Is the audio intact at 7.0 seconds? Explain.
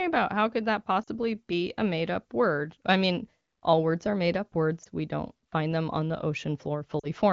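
No. From 6.99 to 7.07 s the speech briefly smears and dips, its tone held unnaturally steady for about 40 ms before it thins, then returns weak or rough for a moment. These are lost AMR speech frames, a span that fits two consecutive 20 ms frames. Radio errors corrupted them, so the wideband decoder repeated the last good pitch and vocal tract settings at falling gain, filling the gap with a fading imitation of the preceding sound.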